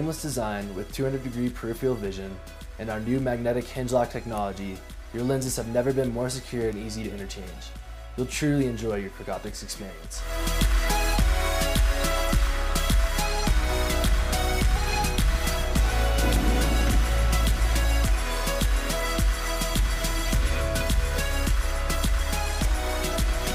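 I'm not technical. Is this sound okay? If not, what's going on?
Yes, this sound is okay, and nothing is going wrong in it.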